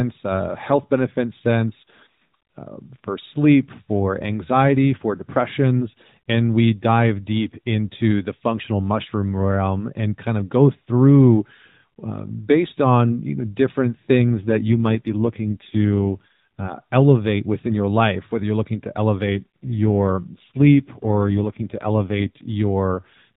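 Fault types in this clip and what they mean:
AMR rate drop: the network pushes the codec to fewer bits, so speech turns buzzy and synthetic twice, which fits a step from 12.2 to 5.9 kbps.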